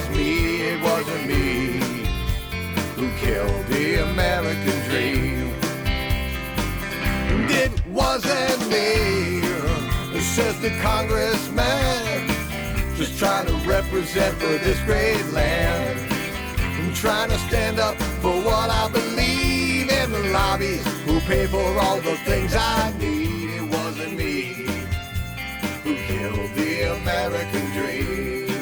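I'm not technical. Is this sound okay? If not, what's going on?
No. From 22.9 s to the end, one channel arrives about 10 milliseconds late and is mixed with the other. This is channel delay (comb filtering): parts of the sound cancel each other, so it turns hollow, thin and phasey.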